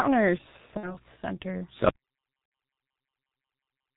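The whole clip carries the sound of the G.723.1 codec. The speech is muffled, with nothing above 4 kHz. It sounds hoarse, and the consonants are smeared. The codec works in 30 ms frames and adapts its model of the voice slowly, so quick changes get blurred. The damage is heavy, which fits a rate of about 6.3 kbit/s.

At 0.77 s, just after "one or", VoIP packet loss concealed by the speech codec begins. About 60 ms of audio went missing, which fits two lost 30 ms frames. The decoder fills the hole by repeating its last pitch and filter at falling gain. That stretches the sound into a fill that fades. Each frame is built from the one before, so the speech stays weak and distorted until about 0.99 s.

At 1.89 s an audio dropout to silence starts and runs to the end. The sound cuts off mid-flow. What follows is silence, with no room tone at all. The input was likely lost while recording continued. 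Anything said after that point is gone.

A second concealed packet loss falls at 2.45 to 2.51 s, again about 60 ms, which points to two more lost frames. It lies inside the silent stretch. Its fill is therefore not heard.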